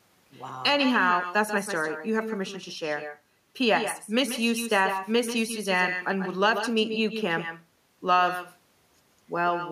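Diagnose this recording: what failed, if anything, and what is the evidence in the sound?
Call processing: echo with no canceller, throughout. The far end's speaker audio returns through its microphone about 9 dB down, a discrete thinner copy roughly 150 ms late, not room reverb.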